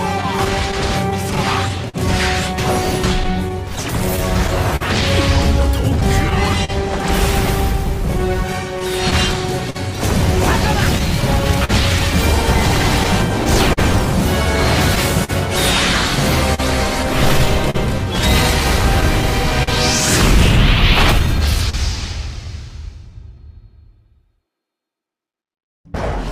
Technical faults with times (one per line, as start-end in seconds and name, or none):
0.00-26.31 clock drift between sender and receiver
0.21-21.75 scattered short gaps
18.59-25.81 repeated timing corrections